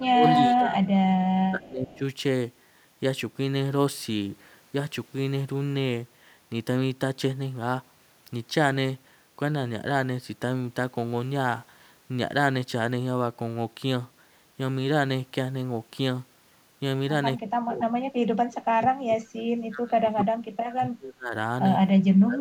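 From 0.05 to 0.82 s and again from 1.26 to 2.02 s, the speech ducks by roughly 15 and then 20 dB, in pieces rather than as one smooth fade. This is speech suppressed in double talk, likely caused by the echo canceller mistaking the talker for loudspeaker echo while both sides spoke, and muting everything it could not separate. Unlike a level ramp from automatic gain control, the voice itself thins and drops out in patches while it is still being spoken.

Inside that second dip, at 1.61 to 1.68 s and 1.89 to 1.98 s, a faint extra copy of the voice appears about 282 ms behind the original, roughly 30 dB down. This is echo leak, likely from residual loudspeaker pickup that the canceller did not remove. Suppression takes sound away, while this adds a delayed ghost on top of the speech.

The suppression returns more heavily from 17.42 to 19.23 s and from 19.68 to 21.34 s, with drops of roughly 35 and 30 dB that leave stretches of the voice nearly gone. 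A shorter dip of roughly 20 dB follows at 22.25 s and runs to the end of the clip.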